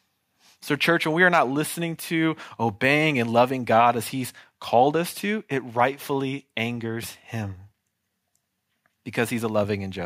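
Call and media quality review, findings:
No call or media quality issues found in this speech recording.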